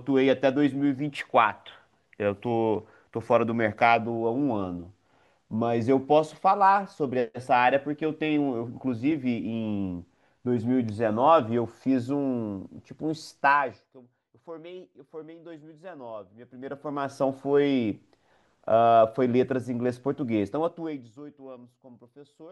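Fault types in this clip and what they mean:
Nothing here counts as a fault; the speech comes across without any technical problem that a listener would pick up on.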